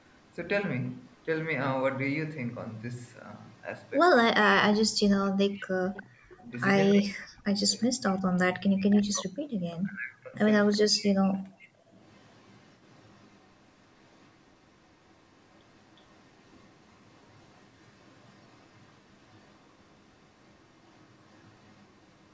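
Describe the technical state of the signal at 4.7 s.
At 4.7 s the speech dips sharply, by about 20 dB at its deepest, between 4.62 and 4.95 s. This is likely speech suppressed in double talk, the echo canceller ducking the near talker while the far side spoke.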